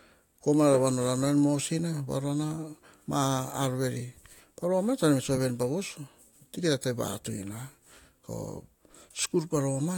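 Speech, with sample clock jitter from 0 to 2.22 s. The converter's timing wobbles by roughly a microsecond or two. This adds a hiss about 40 dB below the signal, roughest on bright, fast-changing sounds.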